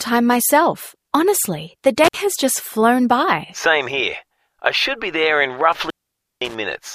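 At 2.04 s the sound drops out briefly with a crackle on either side, the gap itself about 58 ms within a disturbance lasting to 2.17 s. A longer dropout follows from 5.72 to 6.55 s, silent for about half a second apart from faint hiss and framed by crackle. Both are intermittent contact: a loose plug or cable momentarily breaks the connection, and the scraping of the contacts produces the crackle as it opens and closes.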